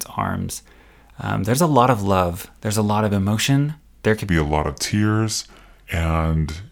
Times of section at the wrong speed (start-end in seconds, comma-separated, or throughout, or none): 4.29-6.71